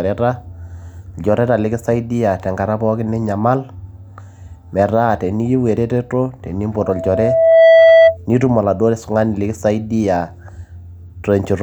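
From 6.76 to 8.17 s, loudspeaker feedback squeal swells over roughly a second into a 656 Hz howl, about 10 dB above the speech. It shows as a single bright spectrogram line.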